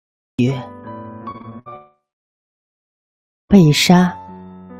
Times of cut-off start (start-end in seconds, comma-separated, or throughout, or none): 0.00-0.39